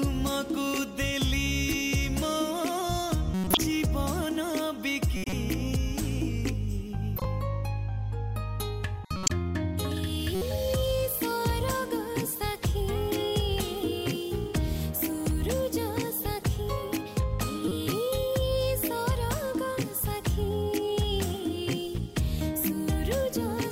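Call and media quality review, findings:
Short chirps and noise bursts at 3.34–3.57 s, 5.17–5.33 s, 7.16–7.25 s, 9.04–9.30 s, 10.35–10.42 s and 17.68–17.72 s, peaking at about −10 to −15 dBFS. Each burst is corrupt frame decoded. The decoder played damaged compressed frames, a few in a row each time, and their misread codes and gains put energy at the wrong frequencies for the length of the affected frames. Check the transport or storage path for bit errors, and the decoder's integrity checking.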